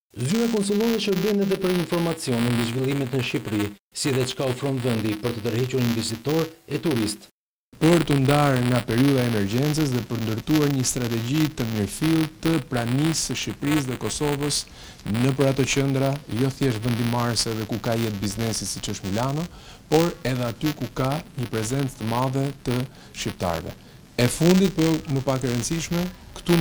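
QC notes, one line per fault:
Throughout, buffer tearing: there's a steady robotic buzz at 200 Hz riding on the sound, and it drops out whenever the signal goes quiet. The writer and the hardware reader of the ring buffer have drifted so they cross once per period, which fits a period of about 5 ms. A small sliver of each buffer, just a few percent, is stale audio from roughly 15 ms back, with a hard edge on either side, so those joins click at the buffer rate.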